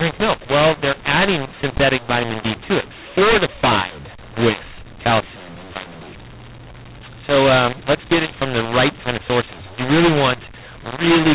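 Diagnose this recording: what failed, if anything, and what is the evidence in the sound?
The fault is at the codec stage, where mu-law and A-law are mixed up. For the whole clip, speech coded as mu-law is decoded as A-law, so levels scramble and pauses fill with hiss. The waveform shows misscaled, jagged peaks and never-silent gaps, and the spectrogram shows everything staying below the 4 kHz band edge.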